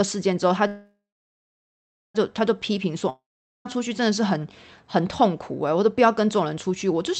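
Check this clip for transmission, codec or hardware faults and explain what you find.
Two transmission faults stand out in the speech, which is band-limited to around 8 kHz as you'd expect from an Opus call path at a moderate bitrate.

A call audio freeze runs from 0.67 to 2.17 s. The last sound is stretched into a fading buzz, then about 1.2 s of silence, and the speech resumes exactly where it stopped. That points to the jitter buffer running empty, likely because packets were held up, which inserts about 1.5 s without losing anything.

A long network dropout follows from 3.09 to 3.67 s. A brief fading tail gives way to roughly 0.44 s of silence, and the speech comes back further on. About 0.56 s of audio never arrived, likely lost packets rather than delayed ones, so that stretch is simply gone.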